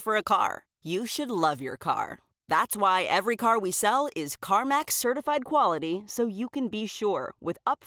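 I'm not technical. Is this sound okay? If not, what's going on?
No. From about 5.03 seconds to the end, the speech turns dull and muffled, as if a hand were over the speaker. This is de-emphasis applied wrongly: a treble cut meant to undo a boost that was never there. It dims the higher tones gradually, unlike a sharp cutoff that removes them abruptly.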